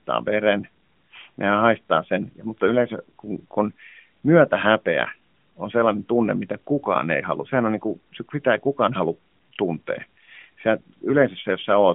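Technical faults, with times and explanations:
No technical faults are present; the signal sits within a telephone-style band of about 200 Hz to 3.4 kHz, as expected from the mobile speech channel it passed through.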